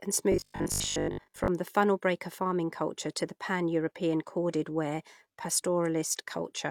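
From 0.32 to 1.48 s the speech turns into a rigid 50 Hz buzz, robotic sound likely from repeating 20 ms buffers. Unlike steady hum, it tracks the speech.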